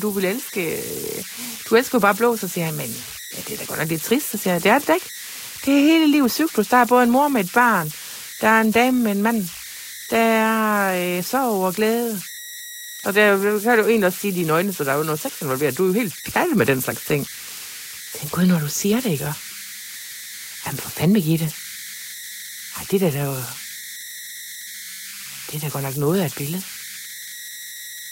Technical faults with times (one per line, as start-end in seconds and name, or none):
0.00-28.11 converter idle tones